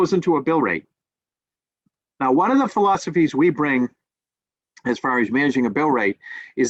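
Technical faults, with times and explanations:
Nothing stood out on listening to this recording.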